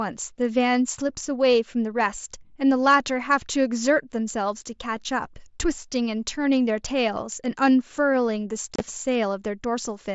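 At 8.74 to 8.80 s, unconcealed Bluetooth headset packet loss leaves abrupt silent holes up to 30 ms long, never concealment's smeared or repeated sound over the mSBC link.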